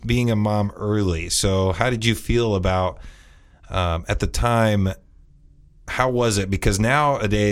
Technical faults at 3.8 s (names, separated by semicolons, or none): none